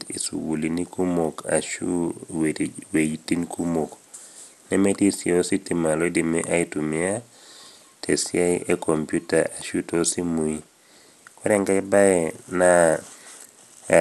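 A speech recording with MP2 compression damage running its whole length. The sound is dull and nothing is heard above 12.2 kHz. A gurgling, granular texture sits on the speech, and the upper range flickers as bands drop in and out. This is likely MPEG Layer II coding at a low rate, which fits something around 80 kbps. Starved of bits, the encoder shuts off whole upper sub-bands and quantises the rest coarsely.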